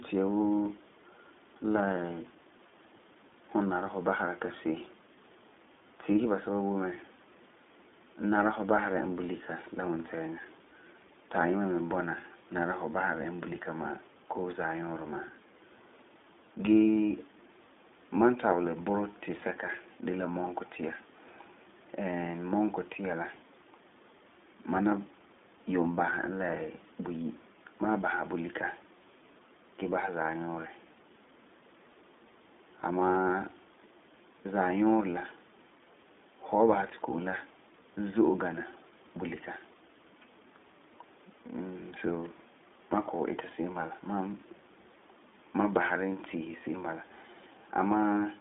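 iLBC codec damage runs throughout, with nothing above 3.8 kHz, thin band-limited speech, and audibly rough, synthetic texture from coding each 20 ms frame independently, consistent with roughly 15 kbps.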